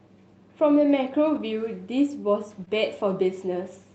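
At 1.35 to 1.41 s, a lost packet is rebuilt from error correction. A low-bitrate copy fills about 40 ms, fitting two lost packets. It sounds rougher and noisier.

At 2.65 to 2.70 s comes short concealed packet loss. About 20 ms never arrived in time. The decoder extended the previous sound, adding roughly 10 ms, heard as a brief smear.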